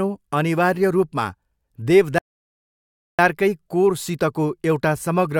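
At 2.18 s the player runs out of downloaded audio and halts until more data arrives, a rebuffering stall. The speech drops to silence until 3.19 s, then resumes exactly where it stopped, losing nothing but adding about 1.0 s to playback.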